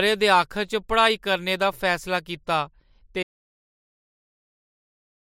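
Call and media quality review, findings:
Audio dropout to silence at 3.23 s, runs right to the end. Speech cuts off mid-flow into dead silence, with no room tone, no fade, nothing recoverable. Likely the input went away (device disconnect, dropped link or a stray mute) while the recorder or encoder kept writing silence. Whatever came after that point is simply gone, so worth checking the capture chain around there.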